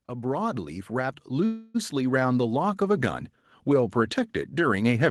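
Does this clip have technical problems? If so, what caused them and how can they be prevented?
Yes. From 0.07 s to the end of the clip, the automatic gain rising fault is present. The gain control judged the incoming level too low and kept turning its gain up throughout the recording. The speech and the background noise get louder together in a slow, continuous swell rather than a sudden jump, so the noise floor climbs along with the talker. To prevent it, set a proper input level at the microphone and slow or cap the gain control's upward adjustment.

From 1.45 s to 1.76 s there is a call audio freeze. The likely cause is that packets were delayed in transit and the jitter buffer ran dry. The receiver covered the gap by stretching the last sound into a fading buzz or hiss for about 0.29 s instead of dropping to silence. When the audio resumes it continues from the same point, so no speech is lost, but everything after it plays about 0.29 s later. 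To prevent it, use a deeper adaptive jitter buffer and a steadier, prioritised network path for the call traffic.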